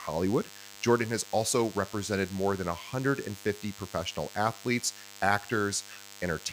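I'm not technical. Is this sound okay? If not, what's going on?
No. A steady, thin buzz runs under the speech for the whole clip. This is DECT cordless phone buzz. A cordless phone or its base station was probably sitting close to the recording gear. That phone sends a short radio pulse 100 times every second. The audio circuit picked up those pulses and turned them into sound. The result is a low, raspy hum that sits well below the speech but never stops.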